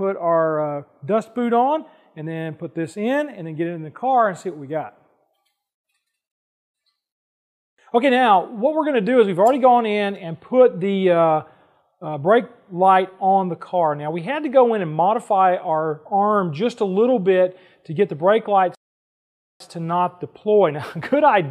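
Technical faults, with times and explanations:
6.32–6.75 s and 18.75–19.60 s, rebuffering stall: the playback ran dry of downloaded audio and halted, so the sound drops to dead silence for about 0.43 s and then 0.85 s before picking up at exactly the point it left off. No material is skipped; the gaps only stretch the timeline. On a waveform each stall is a flat silent band with abrupt edges, and a spectrogram shows a fully blank vertical strip with matching content on either side.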